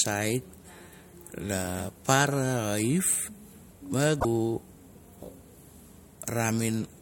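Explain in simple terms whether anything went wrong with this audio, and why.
One thing goes wrong in this speech recording: damaged data in a compressed stream, from 4.17 to 4.25 s. Part of the stored audio data is corrupted, so the decoder misreads that stretch and loses its place until it finds the next valid block, producing a brief chirp, squawk, click or short hole.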